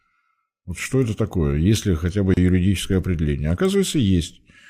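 A speech clip with a gap at a join of encoded pieces: after "ли хотя бы", about 32 ms of silence opens from 2.34 to 2.37 s, left by untrimmed encoder delay and padding.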